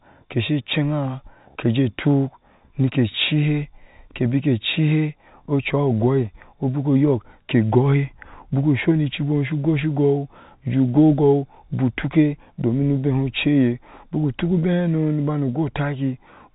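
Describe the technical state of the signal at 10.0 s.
At 10.0 s the audio is intact, with the G.711 telephone coding passing the speech normally and nothing audible above about 3.8 kHz.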